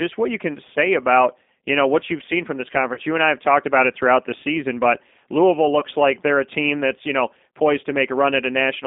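G.729 codec, heard throughout: the speech is carried by a low-rate model that rebuilds each 10 ms frame from a vocal tract filter, a pitch predictor and a handful of pulses. The sound is confined to a line band of about 200 Hz to 3.6 kHz, and the coarse excitation gives the voice a plainly audible rough, synthetic edge. All of this fits an 8 kbit/s G.729A stream.

VoIP packet loss concealed by the speech codec, at 2.94 to 3.00 s and again at 5.80 to 5.85 s: audio went missing for about 30 ms and then 20 ms, which fits three and then two 10 ms frames. The decoder filled each gap by extending its last pitch and filter settings at falling gain, so the speech smears into a brief buzzy tone or coloured noise that fades. The voice sounds thin for a moment after real frames resume, because each new frame is predicted from the faulty ones before it.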